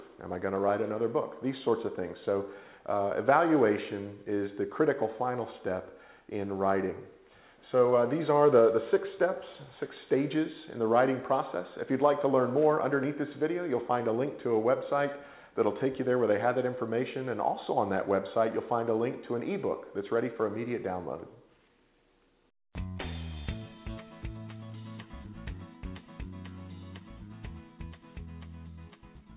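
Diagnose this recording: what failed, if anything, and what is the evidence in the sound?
Nothing in this recording points to a failure at any stage. The audio carries the narrow band of a normal call path, with nothing above 4 kHz, which fits a 64 kbps G.711 A-law codec working as designed.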